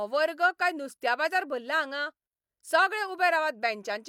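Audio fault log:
No faults are audible anywhere in this speech.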